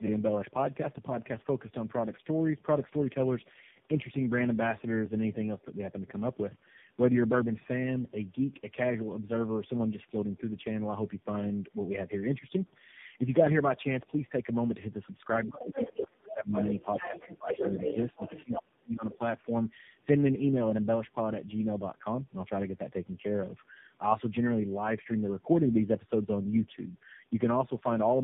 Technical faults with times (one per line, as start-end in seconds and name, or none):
0.00-28.23 tandem speech coding
19.10-19.16 other side's voice leaking through